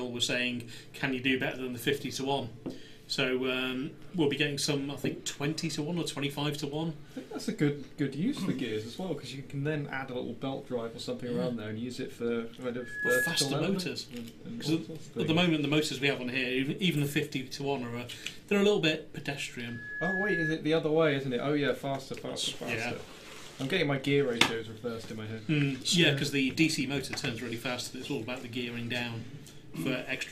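The audio has loudspeaker feedback squeal twice, from 12.8 to 13.65 s and from 19.6 to 20.61 s. Each time a single 1.7 kHz tone swells up in under a second, to about 5 dB above the sound. A microphone is picking up its own loudspeaker.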